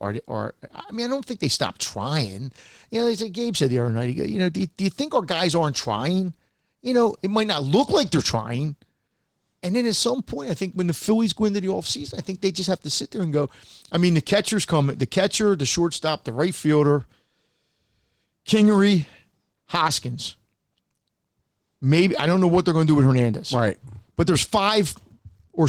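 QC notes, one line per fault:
Throughout: Opus voice compression, plainly audible. The speech sounds hoarse, slightly robotic and a little muffled, which points to a bitrate near 16 kbps in hybrid mode. Linear-prediction coding below 8 kHz quantises the excitation coarsely and roughens the voicing, while a thin transform layer approximates everything above. On a spectrogram, harmonics below 8 kHz look smeared, and the band above shows patchy, blocky energy stepping at a rate consistent with 20 ms frames.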